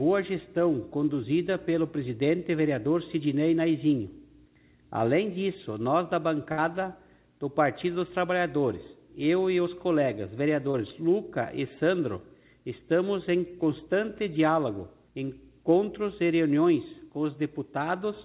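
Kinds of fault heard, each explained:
Burst of packet loss: at 6.52 s about 60 ms is lost; the last sound is held and faded, a smeared, decaying spectrogram patch before a jump.
Short concealed packet loss: at 10.72 s a 20 ms hole is filled by continuing the previous sound, a brief smear.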